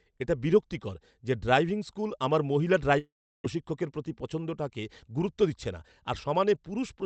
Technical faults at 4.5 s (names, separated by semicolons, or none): jitter buffer speed-up